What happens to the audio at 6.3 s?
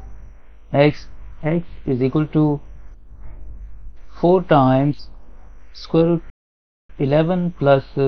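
At 6.30 s the output drops into a playback stall, going silent mid-flow until 6.90 s, a gap of about 0.59 s, before the sound resumes. The likely cause is the player starving for data or its playback thread being blocked, so nothing reaches the output until it recovers.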